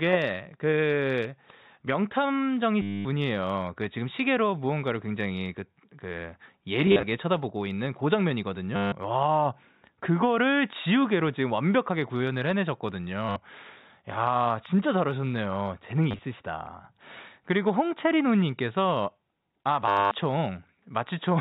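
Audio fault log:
2.82–3.05 s, 6.87–7.03 s, 8.76–8.92 s, 13.29–13.36 s, 16.11–16.19 s, 19.88–20.11 s: packet loss with last packet repeated. Missing audio is filled by replaying the last chunk that arrived. The longest gaps, at 2.82 s and 19.88 s, run 230 ms each. At 6.87 s and 16.11 s the losses are scattered, in runs of 40 ms at most. Each replay seldom joins on pitch. Longer runs buzz near 100 Hz, which points to 10 ms packets. The result is a robotic stutter.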